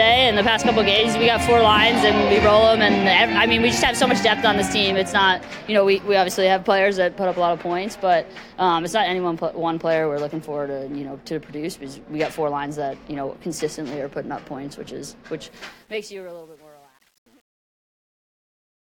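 The sound fades out from about 15.5 s to the end at 18.9 s. From 15.47 s, truncation distortion on a fade sets in. The fade keeps too few bits and adds no dither, which fits a 9-bit path. From 16.0 s to the end, the quiet tail turns gritty.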